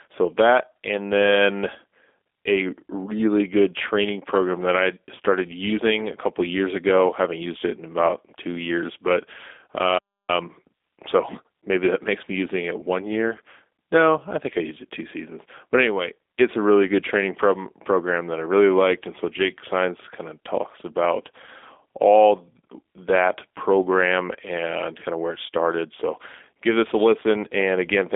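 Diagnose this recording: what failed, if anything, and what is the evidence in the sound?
The codec stage failed. The whole speech clip carries G.729 coding at 8 kbit/s, the G.729A variant. The band runs from about 250 Hz to 3.6 kHz, with nothing above 3.8 kHz. The damage is plainly audible. Pulse-based excitation and a vocal tract filter rebuild the speech, leaving it rough and synthetic.

The playback stage suffered a playback stall. Output goes silent from 9.98 s to 10.29 s, about 0.3 s. The sound stops mid-flow, then resumes. The likely cause is the player's buffer running dry, or its thread being blocked, until it recovered.

Time-compressed catch-up follows from 10.29 s to 10.89 s. The player runs at 1.5 times normal speed there, at its normal pitch. It drops small pieces and cross-fades the joins to shed the backlog the stall created. The speech sounds hurried.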